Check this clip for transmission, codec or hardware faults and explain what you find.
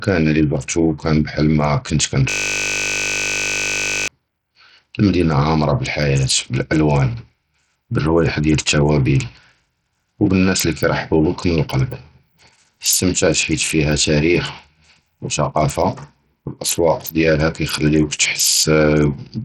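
Two faults are audible in this speech.

Throughout, gritty noise and dull, flickering treble point to heavy Bluetooth SBC compression, likely at a low bitrate near 64 kbps. Coarse sub-band quantisation starves the top bands, so the spectrogram shows nothing above 18.9 kHz and patchy upper bands.

From 2.30 to 4.08 s, a system hang loop repeats one 20 ms buffer. The waveform shows identical cycles, and the spectrogram shows harmonics of the steady 50 Hz buzz.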